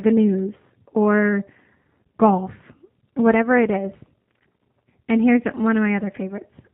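Speech passed through a G.729 codec, and the coding damage is plainly audible across the whole clip. The codec rebuilds each 10 ms frame from a vocal tract filter, a pitch predictor and a handful of pulses, at a rate that fits 8 kbit/s. Nothing above 4 kHz survives, so the speech sounds band-limited, slightly rough and synthetic. At 4.52 s, just after "golf whatever it is", a packet went missing in transit: a gap of about 30 ms, which fits a single lost packet. The speech decoder concealed it by extending its last pitch and filter at decreasing gain. The gap is heard as a brief stretched fragment that fades until 4.55 s. Because each frame builds on the previous one, the speech sounds weak or distorted for tens of milliseconds or more after the gap, until normal frames restore the decoder.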